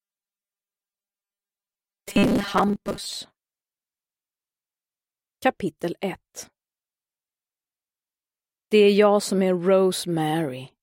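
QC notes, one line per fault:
0.01–3.17 s, robotic sound from repeated short buffers: new audio likely arrived too slowly, so the playback path kept looping its last few milliseconds while the real audio in between was skipped. The result is a fixed buzz at 200 Hz, which fits a repeated chunk of about 5 ms. For most of this stretch the looped copies stand in for the real signal, leaving a rigid metallic tone that only loosely follows the original.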